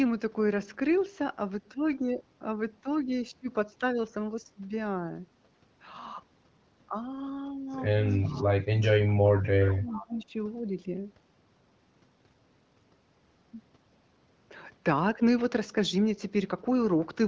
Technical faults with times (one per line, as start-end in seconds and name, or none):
8.10-8.43 echo leak
8.35-9.08 speech suppressed in double talk
9.10-10.07 echo leak
9.47-10.33 speech suppressed in double talk